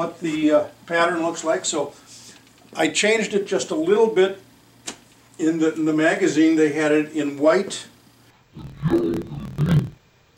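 From 8.30 s to the end at 10.37 s, interleaved audio is read as planar: each 26 ms block of alternating left-right samples is split into halves, dropping the sound an octave, doubled and choppy, with blocks repeating at 38.3 Hz. The spectrogram shows harmonics halved, with vertical striping every 26 ms.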